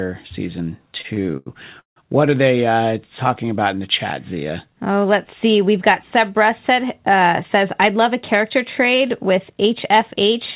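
Repeated stalls (stutter) run from 0.98 to 1.98 s: packets arrived late, the jitter buffer ran dry seven times, and each gap was bridged by stretching the last sound. About a third of that second is filled in, the longest stall 161 ms, so the speech drags and stutters, all within the 4 kHz band of a narrowband call codec.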